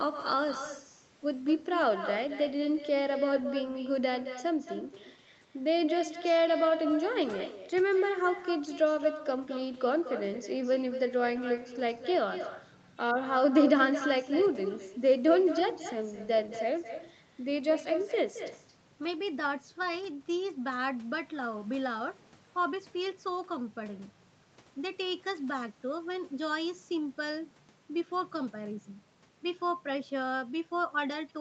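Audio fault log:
Throughout, echo with no canceller: each phrase is shadowed about a fifth of a second later by a quieter, thinner copy, about 10 dB down. The far end's loudspeaker feeds its microphone, and nothing removes that sound before it returns across the network.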